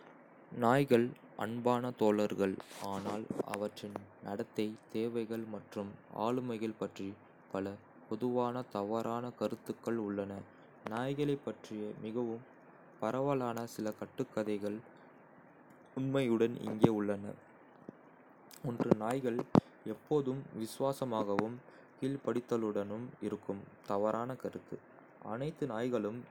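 No technical faults are audible.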